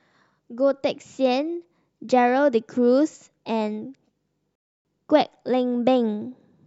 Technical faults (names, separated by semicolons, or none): rebuffering stall